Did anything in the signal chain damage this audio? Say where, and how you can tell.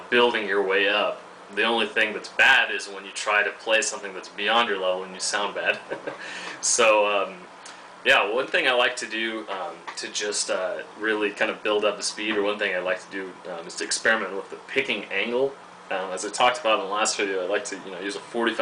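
No, nothing in the signal chain damaged this audio, and no stage shows evidence of harm.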